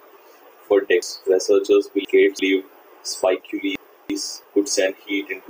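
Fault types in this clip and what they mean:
Chunks out of order: a roughly 341 ms block of speech plays late, three chunks late at 1.02 to 2.39 s and one at 3.76 to 4.44 s, so the speech jumbles at the hard joins, unlike a dropout, nothing goes missing.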